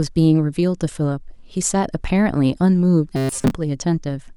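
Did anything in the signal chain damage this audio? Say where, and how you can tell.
Yes: robotic sound from repeated short buffers from 3.16 to 3.52 s, a metallic buzz near 133 Hz riding the speech. That points to a buffer underrun at the driver stage, likely one repeating a roughly 7.5 ms block while most incoming audio was skipped.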